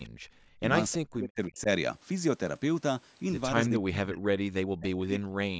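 At 0.05 to 0.09 s, a faint delayed copy of the speech, about 30 dB below it and trailing by 318 ms, slips through. This is likely an echo leak, where a loudspeaker's sound escaped the far side's echo canceller.

From 0.10 to 0.61 s, the room sound drops away by about 39 dB for roughly half a second, then returns. The background was gated by the echo canceller, which clamped the microphone down while the loudspeaker played.

At 0.92 to 0.96 s, the same 318 ms echo reappears, louder this time at about 20 dB below the speech. It is likely the same echo leak.

From 0.97 to 1.68 s, the talker's speech sinks sharply, by roughly 40 dB at its deepest. This is speech suppressed in double talk, likely because the canceller could not separate the talker from overlapping loudspeaker sound and turned both down.

The same suppression returns from 3.69 s to the end at 5.59 s, with dips again reaching around 40 dB across roughly two seconds.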